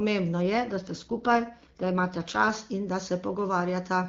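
From 0.42 to 2.5 s an AMR rate drop roughens the speech. The sound fits the codec stepping down from 23.85 to 8.85 kbit/s, turning raspy and synthetic until clean wideband returns before "in da". The spectrogram keeps its full band with no gap, but the harmonics smear. The waveform stays continuous.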